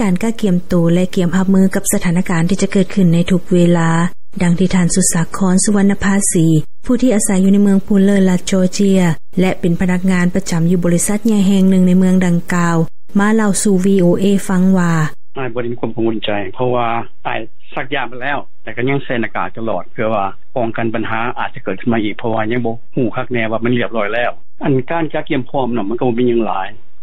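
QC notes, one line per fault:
throughout: DC offset. The entire waveform sits displaced from the zero line by a constant amount, which is inaudible in itself but eats into headroom; a waveform view shows the trace riding off-centre, and a spectrogram shows a steady band at 0 Hz.
1.54–7.54 s: adaptive stream at a lower bitrate. Quality drops abruptly without any gap, as the stream switches to a leaner encode, which fits a step down from MP3 at 128 kbit/s to about 40 kbit/s. Treble vanishes above 15.2 kHz, and codec artefacts thicken; a spectrogram shows a hard ceiling there.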